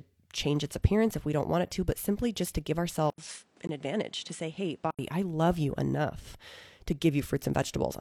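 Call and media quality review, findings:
Likely input switched to a poorer device, 3.1 to 4.99 s: 80 ms silence at switch, then nothing above 10.5 kHz, level down about 5 dB, new noise floor roughly 30 dB under the signal.

Gap between stream segments at 3.67 s: timestamps leave 18.9 ms unfilled, player inserts hard-edged silence; fits 2 s segments, no audio lost.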